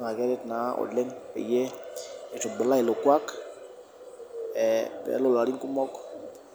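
No technical faults can be heard anywhere in the recording, and the signal stays steady throughout.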